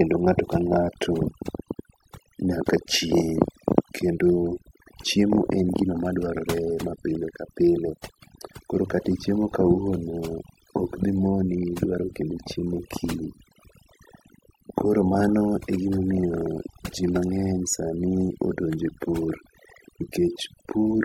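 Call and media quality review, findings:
Across the whole clip, background pulled to near silence, broken by twinkling specks between phrases. Probable component: noise suppressor, overdone noise removal. Set too aggressive, it cuts individual frequency bands whenever they sit near its noise estimate, taking quiet speech detail with the noise and leaving isolated bands that pop in and out.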